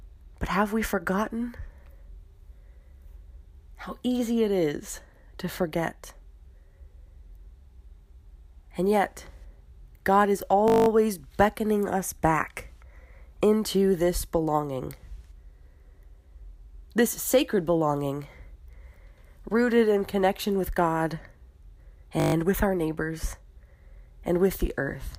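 At 10.68 s and again at 22.2 s, a system hang loop occurs. The playback system briefly froze while the hardware kept replaying the same 20 ms of buffered audio: ten times until 10.88 s, then seven times until 22.34 s. At a 50 Hz repeat rate this is heard as a short, steady buzz, with essentially nothing of the audio lost. A waveform shows identical repeating cycles, and a spectrogram shows harmonics spaced 50 Hz apart.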